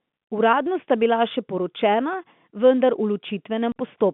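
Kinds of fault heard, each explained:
Packet loss filled with silence: a 40 ms silent hole at 3.72 s, fitting two 20 ms packets, with hard edges rather than repeated or faded-out sound.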